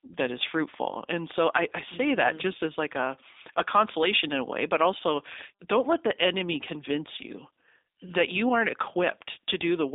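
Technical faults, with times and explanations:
Throughout, G.729 codec: the speech sits in a narrow phone band of 300 Hz to 3.7 kHz, with plainly audible synthetic roughness. That fits an 8 kbit/s G.729A link rebuilding each 10 ms frame from a vocal tract model, pitch predictor and sparse pulses.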